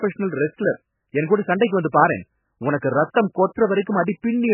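Throughout, the speech has nothing above 3 kHz and sounds watery and swirly, likely from heavy MP3 compression at a very low bitrate, unlike a plain low-pass, which leaves no swirl.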